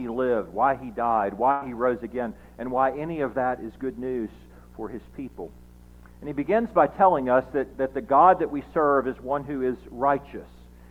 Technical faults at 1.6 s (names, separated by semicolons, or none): burst of packet loss